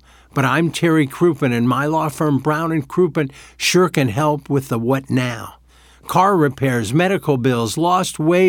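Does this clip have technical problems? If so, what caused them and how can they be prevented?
No, there are no technical problems to report here.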